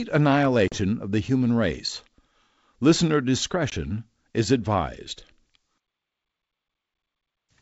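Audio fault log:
0.68–0.79 s and 3.70–3.75 s, packet loss on an ADPCM call: about 40 ms is cut before "of the human race" and 20 ms before "is advised". Each gap is abrupt silence. The decoder's predictor and step size then lag the sender's, so speech returns with brief distortion until they realign.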